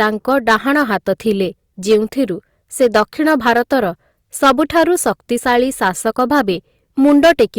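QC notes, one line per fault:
Throughout: hard clipping, driven about 12 dB too hot, so around 2 percent of samples get sliced flat, giving crackly fuzz on louder syllables.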